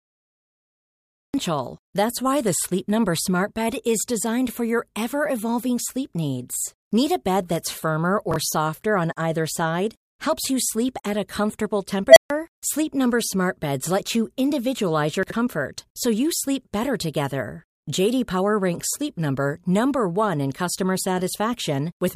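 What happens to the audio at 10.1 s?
Nothing goes wrong at 10.1 s; the speech continues intact through that moment.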